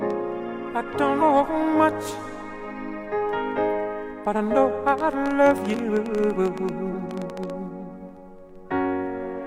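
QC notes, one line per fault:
1.17 s and 5.70 s, compressed frames skipped: each time the sound jumps ahead by about 150 ms, which fits roughly three 42.7 ms frames going missing, and content is lost.
4.89 to 7.51 s, train of clicks: some 40 similar sharp pops, about 10 dB above the sound, arrive at an uneven pace near 12 per second, likely from interference or a faulty connection. Unlike the skips, nothing is lost, and the ticking overlays the sound.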